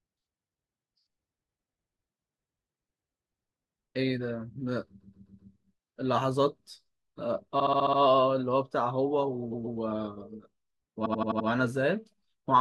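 At 5.00–5.51 s, 7.59–7.99 s, 9.53–9.79 s and 11.05–11.47 s, repeated frames make the speech stutter: the decoder replays the same compressed block (128, 57, 128, 85 ms) two to six extra times. This shows as identical waveform copies.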